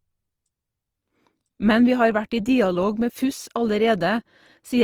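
Speech throughout sounds grainy and rough, with noisy detail in the higher bands, likely Opus compression at a low bitrate around 24 kbps in music mode.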